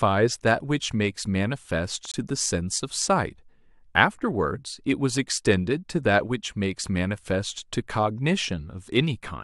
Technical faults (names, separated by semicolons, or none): corrupt frame muted; corrupt frame decoded